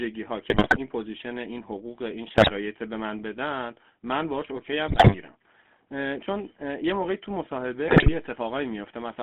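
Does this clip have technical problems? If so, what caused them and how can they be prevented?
Yes. Throughout, the speech has a buzzy, gravelly roughness and a narrow band of about 200 Hz to 3.4 kHz. This is GSM full-rate codec damage: pulse-driven vocal-tract modelling at a bitrate consistent with 13 kbps. Using a wideband or modern codec end to end, or recording locally, would prevent it.

Squawks, pops and gargling break up the speech at 0.50–0.78 s, 2.38–2.52 s, 4.88–5.16 s and 7.88–8.13 s. These are GSM bit errors: corrupted filter, pitch or gain values bend the spectrum or spike the level. A stronger signal or a connection with better error correction would prevent them.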